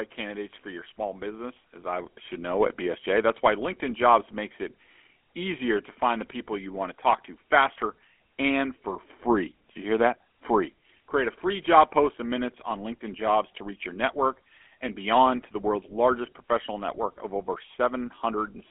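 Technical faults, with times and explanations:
Throughout, GSM full-rate codec: speech confined to 250 Hz–3.4 kHz, nothing above 3.8 kHz; the pulse-excited vocal-tract model adds a plainly audible buzzy, gravelly roughness.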